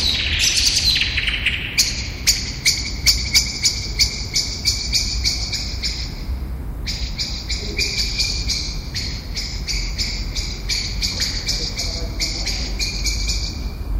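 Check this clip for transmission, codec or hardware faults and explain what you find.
Hard clipping at 0.09 to 1.8 s, 2.28 to 2.70 s and 3.07 to 5.28 s: the sound is driven roughly 8 dB past what a stage can pass, about 10 dB in the last span, so peaks are sheared flat. The added high harmonics give a harsh fuzz on every loud sound.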